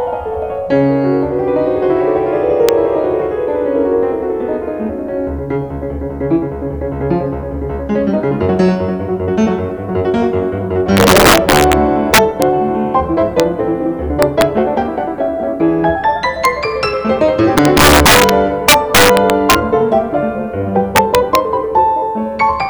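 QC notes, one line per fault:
Throughout, integer overflow: about 6 dB of overdrive pushes roughly half a percent of samples past the integer limit, and they wrap to the opposite sign instead of clipping, giving sharp cracks on loud peaks. Waveforms show full-range sign flips, and spectrograms show broadband vertical streaks.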